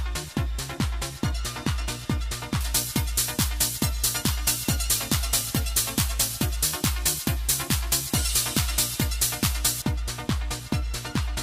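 From 2.61 to 9.82 s, pre-emphasis is left on: a treble boost following the FM 75 µs curve was never undone, lifting 10 kHz about 13 dB relative to 1 kHz. The sound turns thin, bright and hissy, and a spectrogram shows the upper band visibly brighter across that span.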